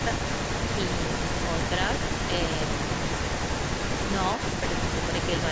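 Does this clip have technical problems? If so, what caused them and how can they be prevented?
Yes. An echo leak runs from 0 to 5.52 s: a distinct repeat of the speech trails it by 182 ms at about 5 dB below the speech, unlike room reverberation's smooth decay. It likely comes from a speakerphone whose echo canceller let through what its microphone picked up. Using a headset or a better-tuned echo canceller would prevent it.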